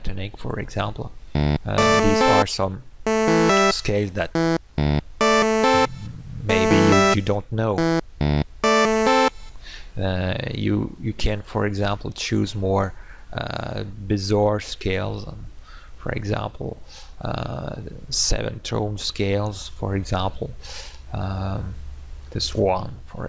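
Nothing is technically wrong with this clip.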